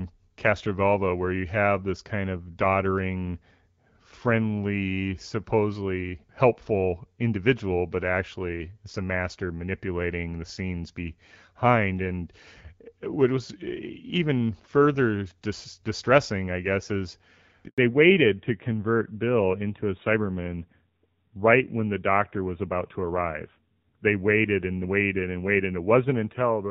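At 17.68 s, right after "distressing I guess is", the speech dies away into a 100 ms silence lasting until 17.78 s: a handover gap, as the call switched networks and no speech frames arrived. The speech simply stops rather than stuttering or repeating, which marks a handover and not scattered packet loss.

From 17.78 s to the end comes a fallback to narrowband. The light-damage HD Voice sound, which fits AMR-WB at 12.65 kbit/s, gives way to a duller, rougher tone with nothing above 4 kHz, which fits AMR-NB at 7.4 kbit/s. The added roughness sets it apart from a simple low-pass filter.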